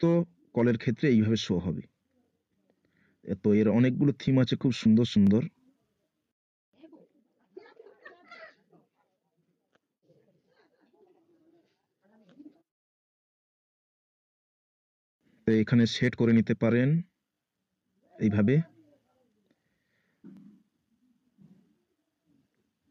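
Gain pumping runs through the whole clip. The background swells in the quiet gaps and ducks by about 5 dB under each loud sound, likely from gain set far too high with a fast limiter clamping down. A waveform shows flattened peaks and a noise floor that rises and falls.

Overlapping chunks appear at 5.27, 8.29 and 20.37 s. At each join, 20 ms of audio plays twice where a 3 s chunk begins before the previous one ended. Each is heard as a brief click or stutter, visible as a vertical seam and a duplicated slice on a spectrogram.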